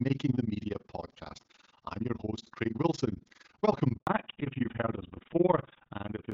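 Overlap-add ripple runs through the whole clip: frames recombined with mismatched overlap make the level swing about 60 dB at around 20 Hz, heard as a rough, fast flutter. At 3.97 s a handover gap cuts the speech for 100 ms while the call switches networks, and whatever was said in that span is lost. From 4.07 s, a fallback to narrowband replaces the AMR-WB HD Voice link at 12.65 kbit/s with GSM full rate at 13 kbit/s, so nothing above 4 kHz passes and the voice turns duller and rougher.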